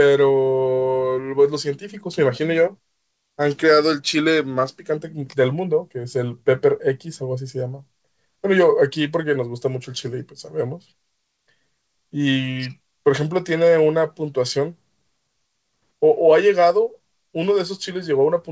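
Clock drift between sender and receiver runs through the whole speech clip: the sender's clock runs roughly 4 percent fast, so the receiver's jitter buffer keeps overfilling.

From 0.38 s to 18.5 s, repeated timing corrections trim short pieces to keep pace, playing the audio at 104 percent speed. They sound like faint hiccups and a slightly hurried tempo, and show as small waveform discontinuities at uneven intervals. The spectrogram stops at 8 kHz, which fits the G.722 call codec.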